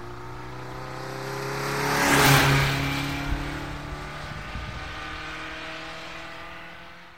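No technical faults can be heard anywhere in the audio.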